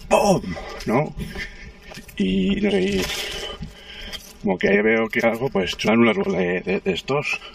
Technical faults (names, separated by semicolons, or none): channel delay (comb filtering); compressed frames skipped